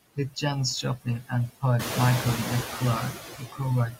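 From the start, noise suppressor artifacts run through the whole speech clip. The suppressor pulls down the bands it judges to be steady noise by about 11 dB, so the background dips between phrases and swells back under them. On a spectrogram the noise floor looks patchy, with speckled gaps in the gaps. That pumping grows more obvious once the room noise climbs by about 12 dB around 2 s, leaving it only about 9 dB below the speech.

From 0.16 to 0.43 s comes the first case of speech cut by the noise suppressor. The suppressor mistakes quiet speech for noise and drags it down by up to about 13 dB, affecting roughly a tenth of a second, so those sounds come out faint and swallowed. The same thing happens between 0.82 and 1.32 s, with a drop of up to about 17 dB over around a fifth of a second, and again from 3.38 to 3.61 s, the deepest at about 19 dB over a similar span. In the waveform the envelope sags abruptly at each point, and on a spectrogram the soft consonant energy and word tails fade into the darkened background.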